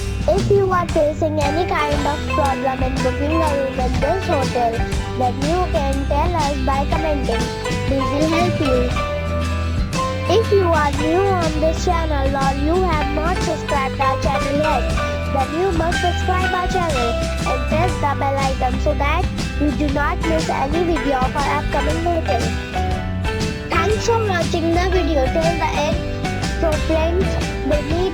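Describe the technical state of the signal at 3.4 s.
At 3.4 s the converter's sample clock is unstable, as it is for the whole clip, so sample timing wanders by a few microseconds. This sample clock jitter puts an error around 35 dB below the signal, heard as hiss that tracks loud, bright passages.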